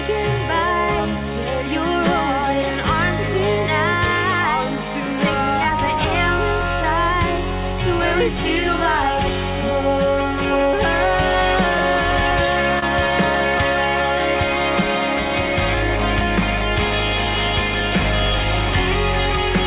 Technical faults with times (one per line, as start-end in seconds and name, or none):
0.00-19.67 clock drift between sender and receiver
0.39-19.49 repeated timing corrections
12.79-12.84 short stall from a late packet